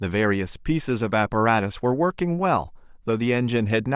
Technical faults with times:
none

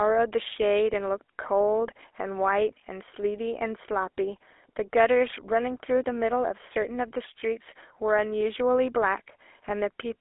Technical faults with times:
0.00-10.20 GSM full-rate codec

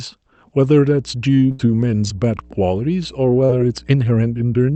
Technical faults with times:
0.58-4.75 mains hum
1.51-1.61 burst of packet loss
3.45-3.51 short concealed packet loss

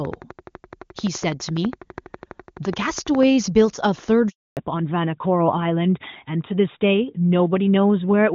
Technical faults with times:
0.05-3.24 train of clicks
4.29-4.57 handover gap
4.57-8.35 fallback to narrowband

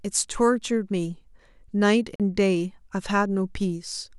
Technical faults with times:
2.16-2.20 Bluetooth dropout

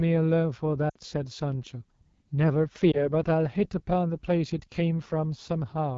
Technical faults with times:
0.00-5.97 AMR wideband (HD Voice) codec
0.89-0.97 lost AMR speech frames
2.92-3.09 lost AMR speech frames

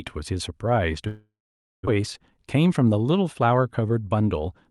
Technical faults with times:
1.07-1.95 long network dropout

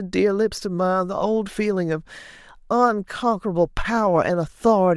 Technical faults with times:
none

